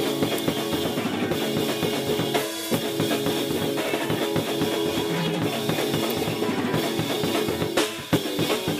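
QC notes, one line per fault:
0.38 s and 6.10 s: electrical switching spike. Two sharp snaps land on top of the music, each lasting only a few milliseconds and peaking at about -5 dBFS. A nearby switch or motor likely arced, and the audio line picked up each brief burst.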